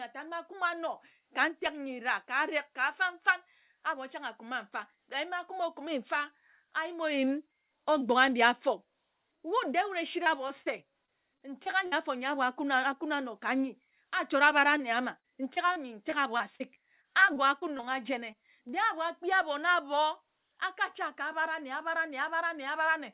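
Short concealed packet loss hits this speech recording three times in quick succession, at 10.24–10.28 s, 10.48–10.52 s and 10.62–10.68 s, with gaps of 20, 20 and 40 ms. Each time the receiver bridged the missing audio by extending the preceding sound before fading back into real signal, so each spot is heard as a brief smear or wobble. Repeated packet loss (robotic sound) follows from 11.06 to 11.94 s, ending just before "afor nyi abor akuna", where four gaps up to 57 ms long cover about 14% of the span, and again from 15.20 to 17.86 s, where fourteen gaps up to 42 ms cover about 13%. Because the patches come one after another, the sound turns choppy, with fragments dropped. Throughout, the audio carries nothing above 4 kHz, which points to a narrowband call codec such as G.711 A-law.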